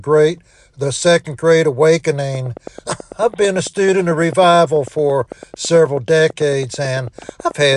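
From 2.35 s to 7.74 s a train of clicks runs over the audio: about 50 near-identical pulses at a regular 9.1 per second, peaking roughly 5 dB above the signal and ticking through pauses too. The likely cause is electrical interference or a faulty connection or power supply.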